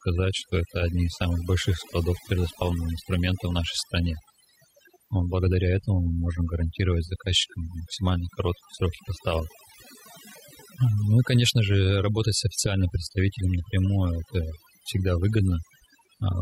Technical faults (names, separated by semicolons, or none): overdone noise removal